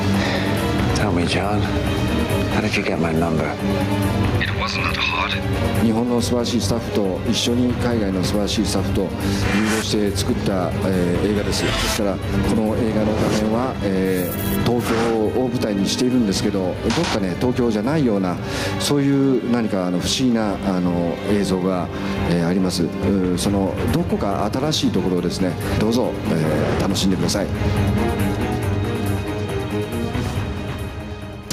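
Input gain was likely set far too high, with a fast limiter clamping down on every loud moment. The result is gain pumping throughout: the gain swells in gaps and ducks by about 10 dB under each peak, squashing the audio.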